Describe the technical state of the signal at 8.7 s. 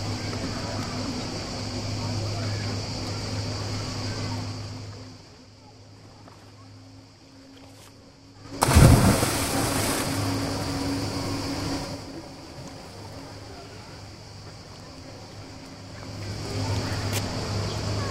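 At 8.7 s you're right at the end of some zipper noise from 8.36 s: a roughly 20 dB move made in 5 dB jumps, each one ticking audibly.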